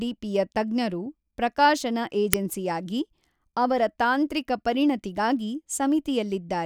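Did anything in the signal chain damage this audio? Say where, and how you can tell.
Yes. At 2.33 s, just after "ತಜ್ಞರು ಪ್ರಕಾಶನ", a roughly 3 ms burst of loud digital noise points to an uninitialised buffer at the driver or buffer stage. The block was played before audio was written, so stale memory became samples. The length fits a 128-sample buffer.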